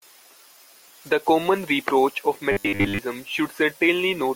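From 2.52 to 2.99 s, just after "common reproach of", the speech turns into a rigid, metallic buzz locked at 100 Hz. This is robotic sound from repeated short buffers, likely caused by late-arriving audio being covered by looping a 10 ms fragment, with most of the real signal skipped.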